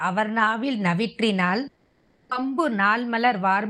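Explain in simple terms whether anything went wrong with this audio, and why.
Something does go wrong, from 1.67 to 2.33 s. The speech suddenly turns into a smeared buzz that fades away. This sounds like a long network dropout. Most likely, the audio stopped arriving for a while. The player tried to cover the gap by stretching the last sound it had, so no clean silence is heard. About 0.6 s of the real speech is simply gone. When the voice returns, it picks up slightly later than before.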